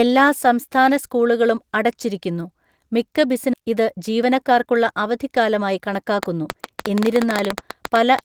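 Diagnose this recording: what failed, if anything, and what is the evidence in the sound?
At the network and jitter-buffer stage, a skip ahead occurs at 3.53 to 3.55 s, just after "സംസ്ഥാന സ്കൂളുകളും അടച്ചിരിക്കുന്നു മിക്ക". Roughly 0.7 s of speech is missing, and the two sides are butted together with no silence or concealment filling the join. The audio was discarded while later packets were already queued. A dropout would leave a gap or a smeared fill, but here the speech simply lurches forward and the delay shrinks by about the same amount.

Immediately afterwards, from 3.63 to 6.04 s, the jitter buffer speed-up is audible. The speech runs at about 108% of normal rate while the pitch stays unchanged, so it sounds hurried rather than higher. The receiver was trimming short pitch-period slices again and again to drain excess buffered delay, removing around a fifth of a second in total. 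A wrong sample rate or resampling error would shift pitch along with speed, but this only compresses time.

From 6.23 to 8.20 s a train of clicks rides over the speech, roughly twenty similar sharp ticks at about 9.7 per second on an uneven spacing, peaking at roughly 15 dB above the speech. These arise in the analogue wiring or the power supply, likely from interference by nearby equipment or a faulty connection or power supply. Because the clicks stand on top of the signal with nothing lost beneath them, they differ from packet-loss glitches, which remove audio instead of adding pulses.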